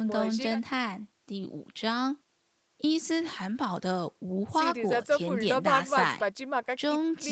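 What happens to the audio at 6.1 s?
At 6.1 s the speech is intact and carries no fault; it simply passes through the call's microphone processing and codec as it does elsewhere, with nothing audible above about 8 kHz.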